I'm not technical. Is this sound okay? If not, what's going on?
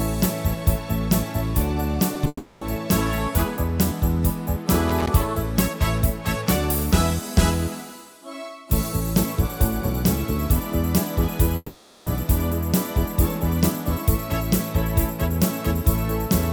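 No. At 2.14 and 2.24 seconds you hear brief smears where the sound wobbles. This is short concealed packet loss: tiny pieces arrived late, and the receiver patched each gap by continuing the previous sound.

From 2.27 to 2.62 seconds, and again from 11.56 to 12.07 seconds, the sound turns into a fading buzz or hiss, then briefly goes quiet before returning with part missing. That is likely a long network dropout, where nothing arrived and the receiver filled the gap until it gave up.

From 4.89 to 5.09 seconds there is a rough burst of scratchy crackle. That is loose connector crackle, caused by a worn or dirty contact cutting in and out.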